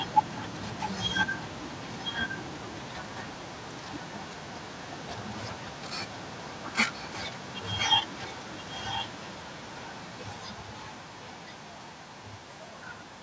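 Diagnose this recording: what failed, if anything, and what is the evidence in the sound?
Echo leak at 0–0.89, 1.08–5.23, 6.07–6.74, 6.92–7.11, 7.38–7.88 and 8.07–13.21 s: speech repeats 1.02 s late, ranging from well below to slightly above the original's level. Call processing: a loudspeaker-side echo canceller likely let its microphone pickup back through.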